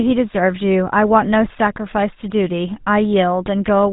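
GSM full-rate codec damage runs throughout the speech. The vocal tract is modelled and driven by regularly spaced pulses that keep only a third of the excitation samples, giving a plainly audible buzzy, gravelly roughness, consistent with 13 kbps, and nothing above 3.8 kHz.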